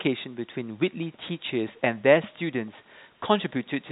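No technical faults are present.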